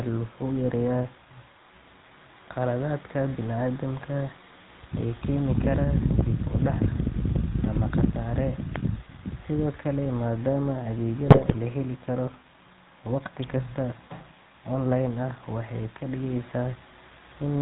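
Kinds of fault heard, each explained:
GSM full-rate codec: The whole clip has a buzzy, gravelly roughness, and nothing above 4 kHz comes through, so the speech sounds thin and hoarse. The codec models the vocal tract as a filter and drives it with a coarse pulse excitation that keeps only every third sample. The damage is plainly audible and fits the original 13 kbps GSM full-rate codec.
electrical switching spike: Two sharp, isolated snaps sit on top of the speech, one at 8.76 s and another at 13.44 s. Each lasts only an instant and does not disturb the sound around it. They are most likely brief electrical arcs from a nearby switch, motor or static discharge that the audio line picked up, rather than anything in the recorded speech.
GSM bit errors: From 11.26 to 11.57 s the speech breaks into squawks, pops and gargling, with the tone and level lurching unnaturally. A weak radio link delivered corrupted bits to the speech decoder, which scrambled the filter, pitch and gain values it rebuilt each frame from. 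The 0.31 s span fits about 15 damaged 20 ms frames, with an error rate of around 4.6 percent.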